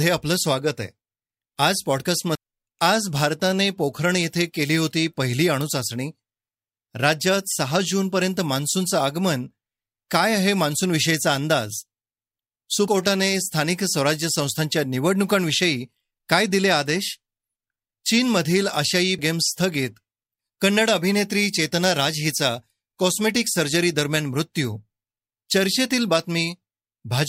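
Damaged data in a compressed stream occurs three times in this speech: from 2.35 to 2.38 s, from 12.88 to 12.91 s, and from 19.18 to 19.22 s. Each burst lasts about 30 ms. At these points the encoded bytes are corrupted, so the decoder misreads the affected frames, loses sync, and must hunt for the next valid frame header. The result is a brief chirp, squawk, click or short hole in the speech.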